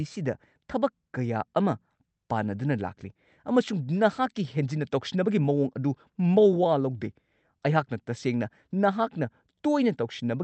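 There are no technical faults to describe at any point in this speech, which comes through an Opus call path working normally.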